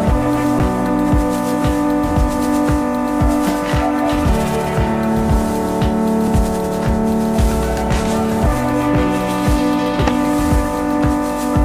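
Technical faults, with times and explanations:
0.59 s and 6.28 s, underrun with held sample: the output buffer ran dry twice, for 5.8 ms and 1.45 ms (fitting 256- and 64-sample blocks). The converter held its last value, so the waveform shows short flat steps, and a spectrogram shows brief blank slivers. Playback resumed where it paused, with no audio lost, so each dropout resumes softly.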